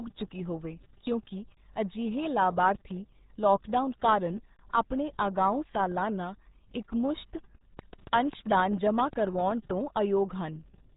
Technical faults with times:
0.00-10.97 RealAudio 14.4 codec

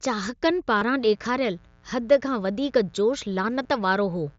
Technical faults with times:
0.78-0.82 concealed Bluetooth headset packet loss
0.95-4.38 mains buzz
3.63 concealed Bluetooth headset packet loss

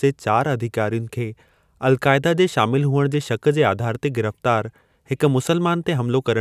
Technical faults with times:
none

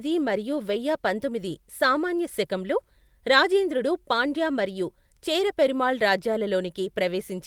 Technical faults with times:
none

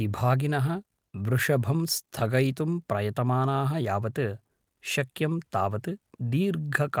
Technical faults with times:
none

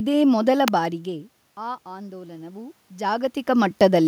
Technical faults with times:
0.68 electrical switching spike
1.04-4.03 automatic gain rising

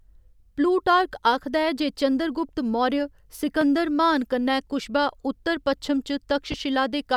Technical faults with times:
3.61-3.65 loud pop
6.52-6.55 loud pop

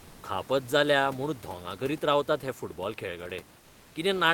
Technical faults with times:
0.00-0.23 comfort noise in place of the background
3.59-3.95 comfort noise in place of the background

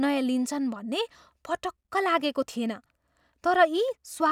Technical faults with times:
none

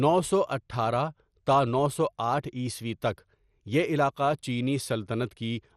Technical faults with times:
0.00-5.77 MP2 compression

